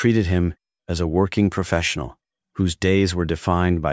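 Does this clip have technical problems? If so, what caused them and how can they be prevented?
No, nothing technical gets in the way here, so there's no fault to trace back or guard against.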